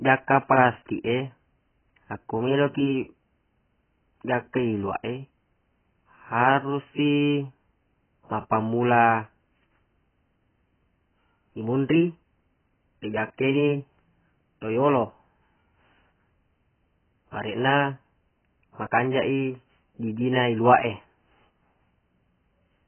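Throughout, the speech stops at 3.1 kHz with warbling, fizzy sibilants, likely heavy AAC compression; a plain low-pass filter would cut cleanly without that smear.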